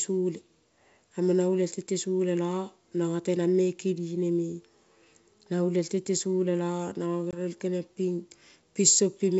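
At 7.31 s a hard-edged 20 ms gap, then distorted speech until 7.39 s: packet loss on an ADPCM call, which knocked the decoder's predictor out of step.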